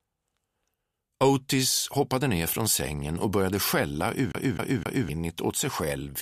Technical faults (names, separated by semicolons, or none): CD stuck on one turn